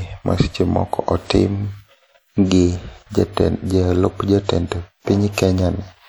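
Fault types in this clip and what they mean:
WMA compression: The speech has a plainly audible ringing, washy quality, with a hiss that rises and falls with the talking. That's likely a transform codec like Windows Media Audio smearing its quantisation noise over tens of milliseconds around each sound, and the amount of damage fits a bitrate around 48 kbps. Content still reaches up to about 20.1 kHz, so the problem is the smeared texture rather than lost top end.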